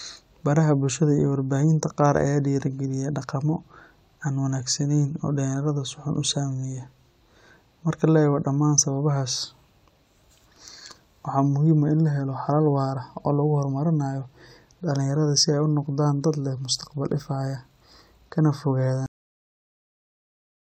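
At 19.06 s the speech hits a cut-off end: the final buffers never played, so sound stops mid-word, and the waveform falls abruptly to flat digital silence without decay.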